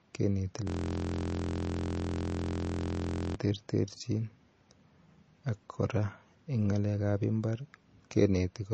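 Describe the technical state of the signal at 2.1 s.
At 2.1 s the signal sits inside a system hang loop running from 0.67 s to 3.35 s. The computer or its audio driver stopped delivering new data while the sound hardware kept replaying the same ring buffer. A single 23.22 ms slice of audio, which fits a 1024-sample buffer, repeats exactly, over and over. Because the slice is so short, the speech is replaced by a steady buzz at 43.1 Hz rather than a stutter.

Beneath that, the whole clip carries damage that is likely from MP3 compression at a low bitrate. Short of bits, the encoder cut everything above 8.4 kHz and dropped weak frequency components that flicker in and out between frames. The result is plainly audible: dull, band-limited audio with a watery, swirling texture and smeared attacks, and it colours the looped fragment too.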